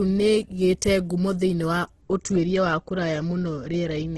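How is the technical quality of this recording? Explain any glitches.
The quality's fairly rough, with one problem running through the whole clip. From start to finish the speech has a grainy, rough, noisy texture, and nothing comes through above 12.2 kHz. That's likely Opus compression in its music mode at a low bitrate, something around 12 kbps, where starved bands get filled with folded or noise content instead of real detail.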